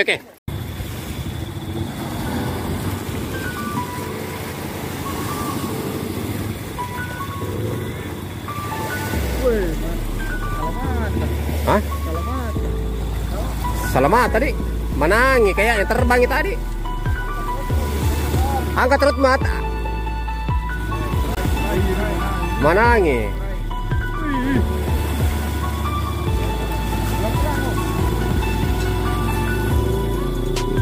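From 21.35 to 21.37 s the sound drops out for about 19 ms, which fits a single lost packet, likely a Bluetooth dropout. Unlike a stall that pauses and resumes where it stopped, the sound picks up later, with the missing stretch skipped rather than delayed.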